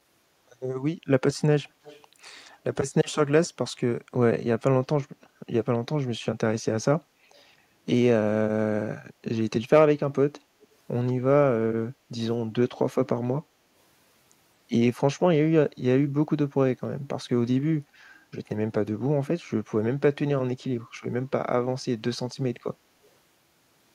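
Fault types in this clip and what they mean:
Echo leak, 1.83 to 2.06 s, 2.25 to 2.51 s and 10.61 to 10.65 s: a faint, delayed copy of the speech trails the original by about 226 ms, sitting roughly 25 to 35 dB below it and fading with each occurrence. The likely cause is a far end on loudspeaker whose echo canceller let part of what its microphone picked up slip through and return down the line as short scraps.
Background gated by the echo canceller, 11.96 to 12.09 s: the room tone dips by about 6 dB for around 150 ms, then recovers. While the loudspeaker was active, the canceller pulled the microphone level down to suppress echo, taking the ambient sound with it, and restored the level as soon as it released.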